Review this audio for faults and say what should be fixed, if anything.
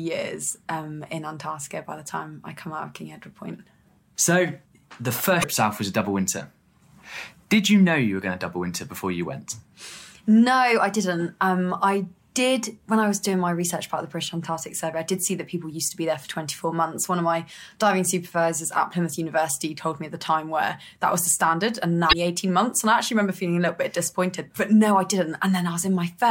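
There's damaged data in the compressed stream, heard as two brief glitches at 5.40–5.44 s and 22.09–22.13 s. The decoder hits bad bytes, loses frame sync and hunts for the next header. Delivering over a checksummed, reliable transport would prevent it.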